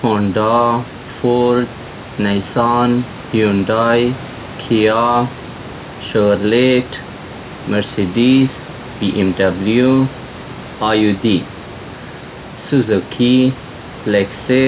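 No technical faults are audible.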